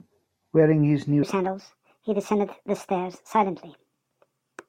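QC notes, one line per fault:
1.23 s to the end: section at the wrong speed. From here the speech suddenly runs about 1.42 times too fast, so everything jumps up roughly seven semitones and sounds hurried and chipmunky, since speed and pitch shift together when samples are just played back quicker. The switch is abrupt, with no ramp. The likely cause is that this stretch got played or conformed against the wrong clock rate, so it isn't being retimed at the rate it was captured.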